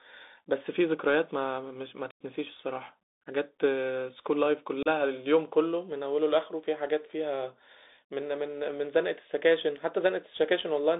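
Speech over a Bluetooth headset link, squeezed into a 250 Hz to 3.7 kHz band by the CVSD headset codec, which fits a 64 kbps link: sibilants go scratchy, with granular hiss underneath. There's also unconcealed Bluetooth headset packet loss, with abrupt dropouts at 2.11 to 2.21 s (about 98 ms, roughly fifteen packets) and 4.83 to 4.87 s (30 ms), each coming back briefly quieter.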